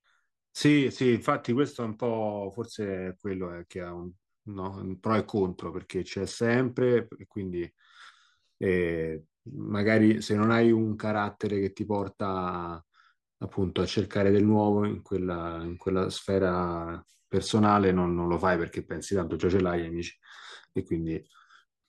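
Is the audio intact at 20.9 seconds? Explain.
Yes, the audio is intact at 20.9 seconds, with no fault audible at that moment.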